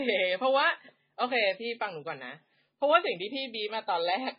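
Across the whole speech clip, nothing sounds above 5.2 kHz, and what remains swirls and warbles heavily, which fits likely MP3 compression at a very low bitrate around 16 kbps. Unlike a plain low-pass filter, weak frequency lines flicker between frames, adding watery, chirpy artefacts.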